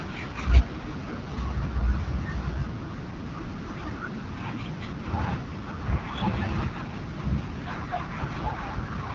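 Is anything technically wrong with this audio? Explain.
Yes, the speech has gone through AMR wideband (HD Voice) coding the whole way. It's rough and raspy, consistent with one of the lowest rates around 8.85 kbit/s, and nothing reaches past 7.3 kHz.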